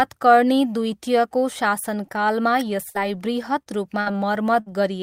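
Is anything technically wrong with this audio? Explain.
Yes, the speech loses audio to the network several times in the second half.

A burst of packet loss hits at 2.89 s, 4.01 s and 4.60 s: about 60 ms of the call failed to arrive, and the receiver stretched the last sound for roughly 50 to 60 ms while fading it, so a held buzz or hiss replaces the missing stretch before speech jumps ahead.

Short concealed packet loss occurs at 3.63 s and 4.12 s, where about 20 ms never reached the decoder in time. The receiver extrapolated the preceding sound for 20 to 30 ms and blended back, heard as a brief smear or wobble.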